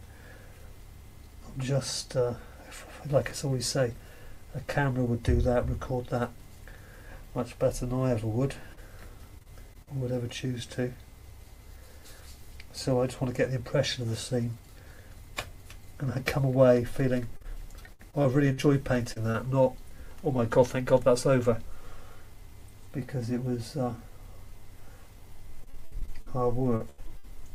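At 8.73 s, a short concealed packet loss leaves about 40 ms of audio undelivered. The receiver extends the preceding sound across the hole and then blends back in, so it registers as one brief smear or wobble, an isolated event rather than a run of breaks.

Repeated packet loss (robotic sound) follows at 9.39–9.89 s, 17.37–19.36 s and 25.64–27.46 s. Holes recur in quick succession, the longest about 41, 62 and 81 ms respectively, and each is patched by continuing the last sound. With roughly 13 to 22 percent of each stretch synthesised, the result is choppy, with pieces missing, unlike the single smear.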